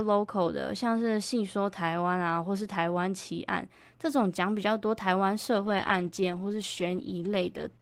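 From 5.56 s to the end, a call bitrate drop turns the speech rough and watery, which fits the Opus encoder falling from 32 kbps to about 13 kbps. On a spectrogram, energy that reached 12 kHz is cut lower, and harmonics look smeared and blocky.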